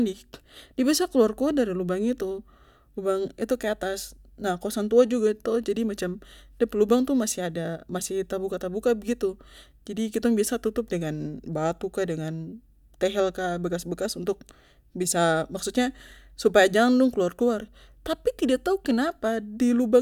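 No technical faults turn up anywhere in this speech recording, so there's nothing to pin to a timestamp.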